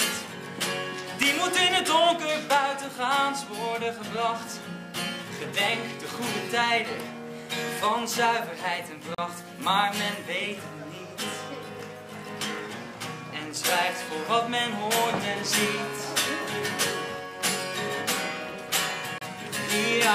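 At 9.15 to 9.18 s and again at 19.18 to 19.21 s, about ten seconds apart, a gap at a join of encoded pieces cuts silence of 36 ms and 31 ms into continuous sound. Separately encoded segments were joined with their start delay and end padding left in. Each gap shows as a flat waveform stretch and a thin blank spectrogram column with smeared edges.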